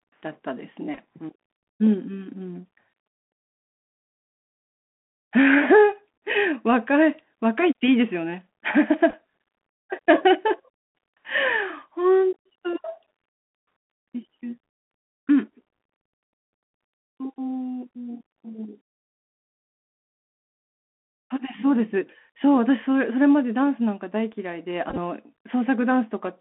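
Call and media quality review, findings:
Bluetooth CVSD headset codec, throughout the speech: band sits around 200 Hz to 3.4 kHz, scratchy s sounds, granular hiss, fits 64 kbps one-bit delta coding with adaptive step.

Bluetooth headset packet repeated at 0.95–0.99, 9.10–9.13 and 24.90–24.97 s: brief buzzy ticks where lost headset packets were replayed; worst at 24.90, about 45 ms lost over 75 ms.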